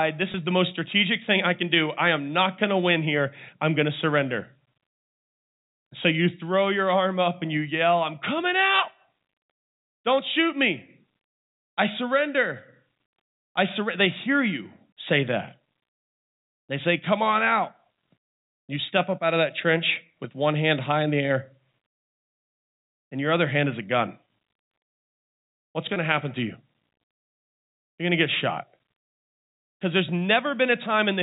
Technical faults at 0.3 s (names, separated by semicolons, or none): packet loss with pitch repetition